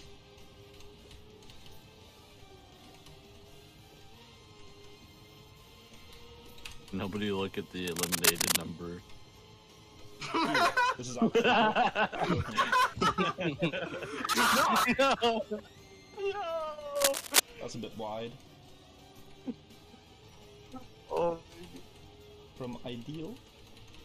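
A worn cable or connector likely shifting causes cable scratch noise: rough bursts of scratching at 7.87–8.62 s, about level with the sound, and 16.96–17.40 s, somewhat louder.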